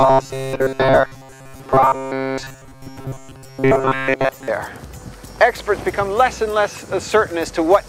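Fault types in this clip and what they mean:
Robotic sound from repeated short buffers: from 0.01 to 4.48 s the sound turns into a stiff, metallic buzz fixed at 133 Hz. That's likely audio arriving too slowly, with the player looping a roughly 7.5 ms chunk, so most of that stretch is repeats.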